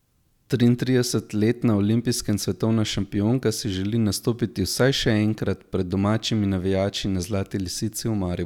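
Nothing stood out as a technical problem on listening to the speech in this clip.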